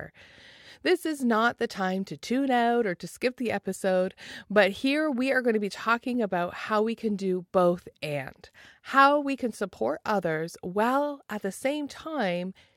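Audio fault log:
No fault is logged for this speech clip.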